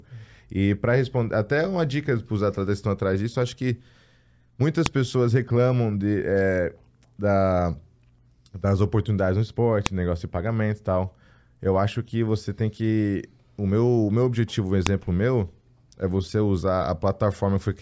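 A speech clip with three sharp, loud clicks: one at 4.86 s just before "pessoas reclamam de é", one at 9.86 s between "das oportunidades no" and "negócio de pagamento e", and one at 14.87 s between "meu objetivo um" and "meu é você". They are a file header played as audio. The pieces were joined every 5 seconds with their WAV headers left in, so those bytes play as samples. On a waveform each is a lone tall spike, and on a spectrogram a thin vertical line across all frequencies.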